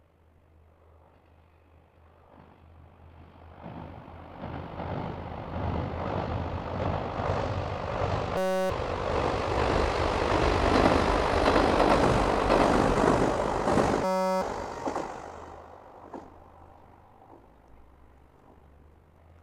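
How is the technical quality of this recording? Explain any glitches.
The recording has two audible glitches, both a system hang loop. From 8.37 to 8.70 s and again from 14.04 to 14.42 s, the sound turns into a steady buzz at about 188 Hz. The system froze while the hardware kept replaying the same 5.33 ms slice, which fits a 256-sample buffer, 61 and 70 times. Roughly 0.3 s and 0.4 s of audio are lost. Unlike a dropout, the gap is filled by a pitched buzz rather than silence.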